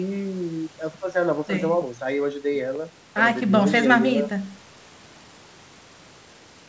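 No technical faults can be heard in this speech clip.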